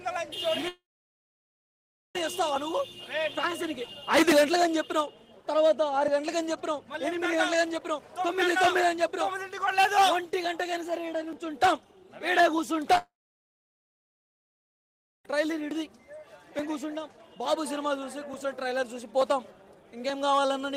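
The audio drops out twice, from 0.68 to 2.16 s and from 12.98 to 15.26 s. In each gap a brief fading continuation of the preceding sound gives way to about 1.34 s and 2.15 s of silence. The sound then resumes with that stretch missing, which points to a likely long network dropout. Immediately before the second gap, at 12.96 s, a short concealed packet loss replaces 10 ms with a synthesized continuation of the previous sound. That brief patch is audible as a small smear just ahead of the dropout.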